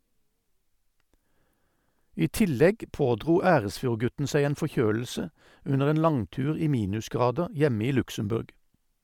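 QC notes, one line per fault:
No faults were found in this speech clip. There is nothing to log.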